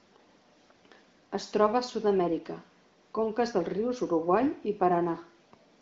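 Nothing in this speech recording stands out as a technical fault. It passes through the AMR wideband (HD Voice) codec at 18.25 kbit/s with at most faint coding traces, and the sound stops around 7.5 kHz, as expected for that path.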